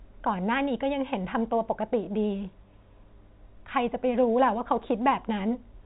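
No faults found in this speech clip; the G.711 A-law telephone coding at 64 kbps holds everything under 4 kHz, and its level-following quantisation noise stays faint at most.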